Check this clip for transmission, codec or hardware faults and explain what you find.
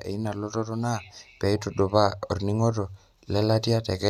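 Nothing in the signal points to a transmission, codec or hardware problem; level, continuity and bandwidth stay steady throughout.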